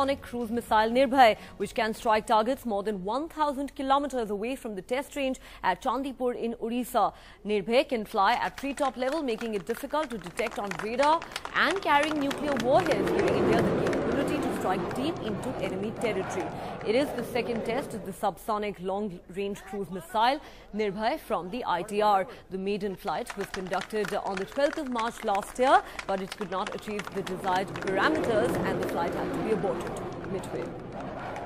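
No technical faults are audible.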